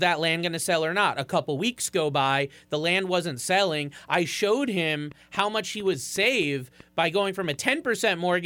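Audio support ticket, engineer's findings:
Train of clicks, 5.12 to 8.35 s. Roughly ten similar pops at about 3.4 per second, irregularly spaced, peaking near speech level and audible in pauses. Likely cause: interference from nearby equipment or a faulty connection or power supply injecting pulses. Waveform: narrow spikes standing out of the envelope, obvious in gaps. Spectrogram: thin full-band vertical lines at uneven intervals across that span.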